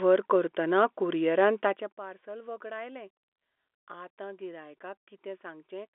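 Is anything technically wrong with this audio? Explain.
No, nothing technically wrong is audible in this speech clip.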